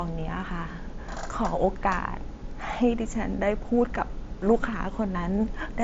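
Nothing goes wrong anywhere in this speech recording; it arrives over a Bluetooth mSBC headset link, so the sound tops out at around 7.7 kHz and carries a touch of that codec's light graininess, which is just how the link normally behaves.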